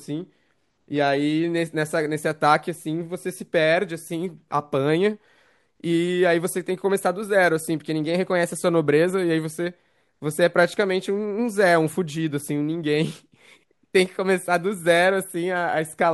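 No technical fault can be heard anywhere in the recording; the signal stays continuous and stable throughout.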